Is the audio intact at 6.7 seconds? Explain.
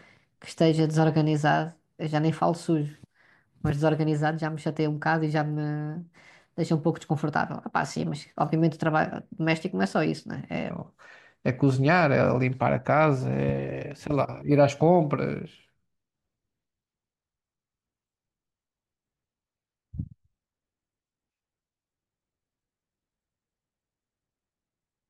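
No, a section at the wrong speed runs from 0.0 to 10.70 s: playback at 1.17 times speed, likely from a clock mismatch, makes the speech hurried and about three semitones high.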